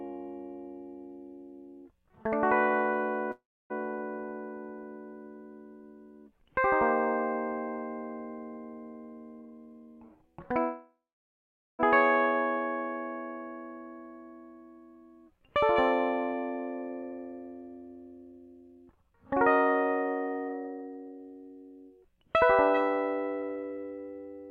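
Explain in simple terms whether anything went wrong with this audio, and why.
The music stops twice. At 3.31 s it halts for about 0.4 s. At 10.60 s it halts for about 1.2 s, until 11.81 s. Each time the last sound trails off as a fading buzz or hiss, then goes quiet for most of the pause. Then the music resumes exactly where it left off. Nothing is lost, but a gap is added. This is a call audio freeze. Delayed network packets likely emptied the receiver's small holding store.

Three stretches also rush. From 9.41 to 10.53 s the music plays at 116% speed. From 17.02 to 19.45 s it again plays at 116%. From 20.49 to 22.43 s it jumps to 143%. The pitch stays the same, but the beat hurries and the tempo wobbles. This is a jitter buffer speed-up. Too much audio had piled up, so the receiver cut out many tiny slices to catch up. Those slices add up to about 0.2 s, about 0.4 s and about a second.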